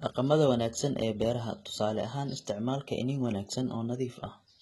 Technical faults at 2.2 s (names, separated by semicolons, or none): HE-AAC compression